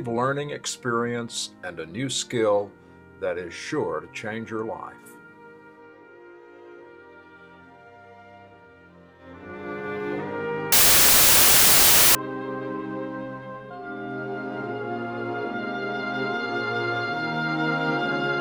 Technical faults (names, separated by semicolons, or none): samples built from the wrong bytes